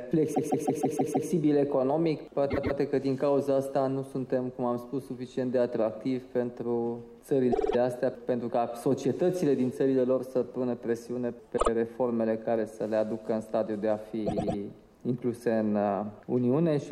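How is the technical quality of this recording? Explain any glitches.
Repeated frames break the playback five times, at 0.33–1.27, 2.50–2.76, 7.51–7.75, 11.56–11.68 and 14.25–14.57 s. Each time, a short compressed block (52 to 157 ms) is played again between two and six times, giving an audible stutter and lengthening the audio by up to 0.94 s.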